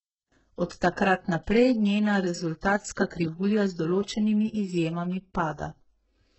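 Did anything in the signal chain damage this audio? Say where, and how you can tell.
Yes. Throughout the speech the treble sounds synthetic: s sounds are gritty and lispy, and nothing reaches above 8 kHz. At the codec stage, this is likely HE-AAC compression, with heavy damage that points to a very low bitrate around 8 kbps. Spectral band replication rebuilds the upper band from copied lower harmonics that don't align with the originals.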